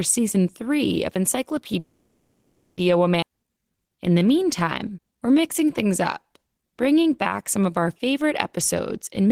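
From 1.79 to 2.79 s there is a call audio freeze. The sound stops moving forward and the last moment is stretched into a fading buzz for about 980 ms. Delayed packets likely drained the jitter buffer. Nothing is lost. The sound resumes where it paused, now about a second late.

At 3.21 to 3.24 s there is a skip ahead. Roughly half a second of speech is missing. The two sides are joined with only a tiny gap. The delay drops by roughly half a second.

From 3.29 to 8.27 s there is a jitter buffer slow-down. Single pitch periods and bits of pauses are repeated over and over, adding 440 ms. The speech runs at 91% speed. The pitch stays the same, but sounds are drawn out.

From 9.21 to 9.31 s there is a jitter buffer speed-up. Short pitch-period slices, about 50 ms in total, are cut out to shrink the delay. The last tenth of a second plays at 148% speed. The pitch holds, but it sounds hurried.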